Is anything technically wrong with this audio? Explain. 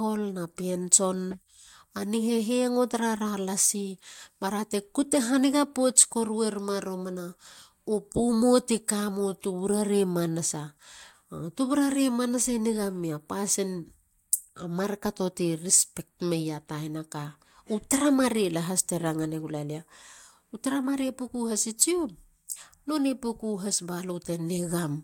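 No, nothing technically wrong can be heard in this speech recording. The signal carries steadily throughout, with no audible breaks or disturbances.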